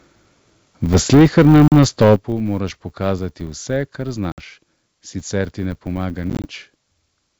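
A steady buzz at 100 Hz runs under the whole recording and grows and fades with the speech level. This is a filter restarted on every block: the filter drops its memory at each block boundary and starts again from silence, so every block opens with a tiny transient. Those transients repeat a hundred times a second, which fits 10 ms blocks, and they merge into a tone that tracks the loudness.

From 0.92 to 2.15 s the loudest syllables sound harsh and crackly, with their tops flattened. This is likely microphone overload. The peaks go about 8 dB beyond what the converter can represent, and a large share of the samples in that stretch are cut off flat at the limit. The result is a gritty edge on every strong peak.

At 1.15 s the level drops by about 3 dB in one step. At 2.16 s, right as the distortion ends, it drops again by about 10 dB, and the voice and background fall together. The likely cause is the microphone volume being stepped down: the call software reacted to the overload and lowered the input gain, first slightly, then sharply.

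There are hard-edged gaps at 1.68–1.73 s (40 ms lost) and at 4.32–4.40 s (60 ms lost). From 6.30 to 6.47 s there is a cluster of short dropouts, 70 ms in total over about 140 ms, none longer than 20 ms. After each gap the speech comes back with a click, roughness, or the wrong level before settling. This is packet loss on an ADPCM call. Silence replaced the missing packets, and the decoder's predictor and step size lost track of the sender's, so it needs some tens of milliseconds to catch up. The G.722 wideband coding underneath stays clean through all of this.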